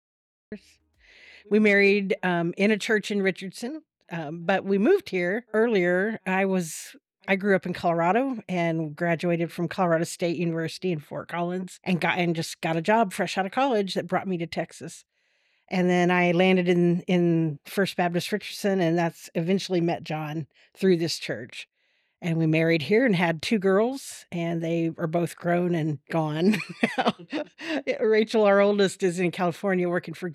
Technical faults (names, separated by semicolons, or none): cut-off start